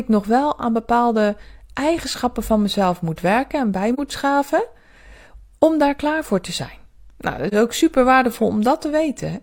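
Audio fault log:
3.94–3.99 s and 7.48–7.54 s: AAC frame loss with muting. After "moet werken en bij" and before "ook super", the sound fades into a brief dip and back out, which fits one zeroed frame of about 43 ms. Overlapping windows soften both edges. A spectrogram shows a narrow faded column across all frequencies, and the waveform tapers smoothly down and back up.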